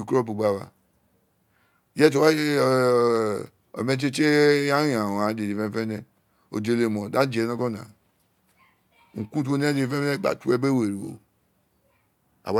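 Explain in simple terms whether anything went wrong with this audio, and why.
Nothing went wrong here.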